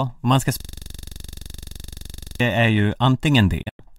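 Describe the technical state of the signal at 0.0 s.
Nothing is wrong with the signal at 0.0 s: the speech starts cleanly, with no audible fault at that moment.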